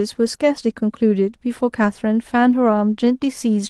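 At about 2.51 to 2.55 s there's a short concealed packet loss: roughly 20 ms of audio, which fits one lost call frame, never arrived, so the decoder stretched the preceding sound and blended back in. You hear a quick smear, with the call's band topping out near 12 kHz.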